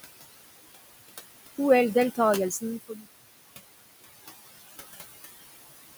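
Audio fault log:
Throughout: noise suppressor artifacts. The noise suppressor is judging the steady room noise band by band, frame by frame, and pulling it down by about 17 dB wherever it decides no speech is present. Because that background sits only about 14 dB below the speech, the gating can be heard: the noise sinks away in the gaps between words and swells back up underneath them, giving the background a pumping, breathing quality.
2.89–3.05 s: speech cut by the noise suppressor. Here the suppressor mistook part of the speech itself for noise and turned it down along with the background, by about 9 dB at the deepest point. Roughly a tenth of a second of sound is affected, and it comes across as swallowed and faint. This happens while the smooth fade-out, running from around 2 s to 3.45 s, is already lowering the level.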